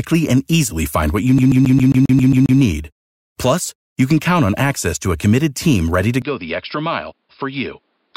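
From 1.38 to 2.59 s, just after "easily find what you", the CD is stuck on one turn: a scratch keeps returning the laser to the same track, so a 0.13 s fragment repeats nine times, each jump marked by a brief mute, giving a rapid, even stutter.

At 6.22 s, after "committed team ready to", the speech abruptly turns dull and boxy through to the end, with no gap at the change. Nothing is present above 5.2 kHz, the level drops by roughly 5 dB, and a faint new noise floor appears. The likely cause is the input switching to a poorer device.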